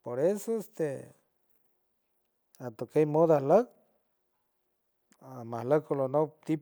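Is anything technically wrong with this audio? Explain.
No, nothing technically wrong can be heard in this speech recording. The audio is steady throughout, with no dropouts, clicks or other disturbances.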